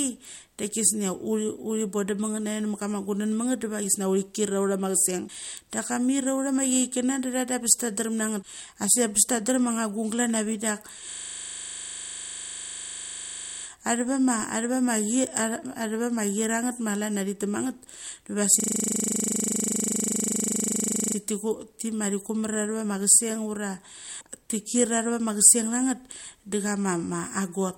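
Damaged data in a compressed stream first appears at 5.25 to 5.30 s and again at 8.39 to 8.44 s. Corrupted bytes make the decoder misread frames and lose sync, so each spot sounds like a brief chirp or blip lasting about 50 ms while the decoder hunts for the next valid frame header.

A system hang loop runs from 11.12 to 13.64 s and again from 18.60 to 21.16 s. The computer stalled while the sound hardware kept replaying one 40 ms slice of its ring buffer, roughly 63 times in each stretch, producing a steady 25 Hz buzz. Little or no audio seems skipped afterwards.

The same damaged-data blip returns at 24.17 to 24.22 s, a short squawk of about 50 ms.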